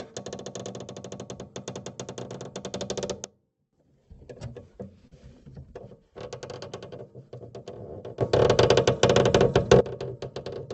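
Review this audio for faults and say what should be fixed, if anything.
A digital gain change was likely applied without a ramp, producing a sudden gain jump. From 3.24 to 3.73 s the sound and its background noise drop together by about 18 dB, then come back. From 8.21 to 9.81 s they rise together by about 17 dB. Each change happens from one sample to the next. To prevent it, ramp every gain change over a few milliseconds instead of switching it instantly.

At 5.07 s a packet arrived late and the jitter buffer ran dry, causing a short stall from a late packet. The receiver held the last sound for 41 ms until the packet came in, then resumed from the same point. Nothing is lost, but that moment lingers with a slight buzz or dip. To prevent it, keep enough jitter buffer depth to cover normal packet arrival variation.

From 10.14 to 10.64 s the jitter buffer held more audio than it aims for, and the receiver trimmed roughly 40 ms in small pitch-period pieces. 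This jitter buffer speed-up makes the audio run about 6% faster at the same pitch, so it sounds hurried. To prevent it, smooth packet delivery so that delayed packets don't arrive in bursts.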